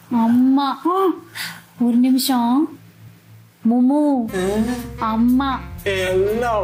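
No technical faults can be heard anywhere in this audio. There is nothing here that needs a timestamp or an explanation.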